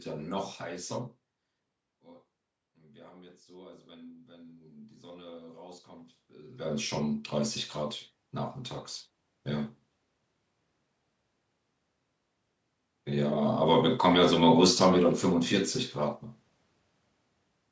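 From 2.01 to 5.5 s, after the talker drifts back from the microphone around one second and the input falls by about 19 dB, automatic gain rising sets in: the gain control lifts its level by about 4 dB, so voice and room noise swell together. The waveform envelope and the spectrogram's noise floor brighten together gradually. The same slow climb, about 3 dB, recurs from 14.03 to 16.27 s.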